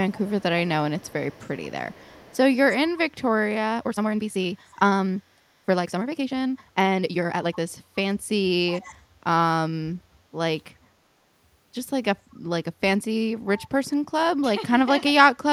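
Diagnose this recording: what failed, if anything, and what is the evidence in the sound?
Call processing, echo leak: faint speech copies trail 363 ms behind at 0.09, 0.99, 1.29, 1.89, 4.7, 8.66 and 12.34 s, about 20–40 dB down, likely from incomplete far-end echo cancellation.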